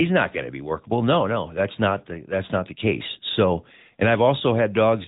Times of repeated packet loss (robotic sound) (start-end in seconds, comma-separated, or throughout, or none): none